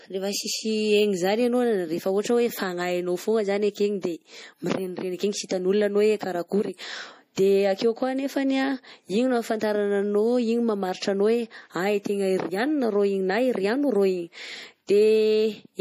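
Throughout the speech, nothing sounds above 15.3 kHz. Weak detail flickers in and out, giving a watery, swirly texture. S sounds turn metallic. This is likely MP3 compression, at a rate that fits a low bitrate near 40 kbps.

At 5.49 s and 7.36 s, pre-echo appears. A short hiss leads each sharp attack, by 17 ms and then 13 ms. The codec spread its noise across a whole block, so it leaked ahead of the attack. Both onsets sound softened.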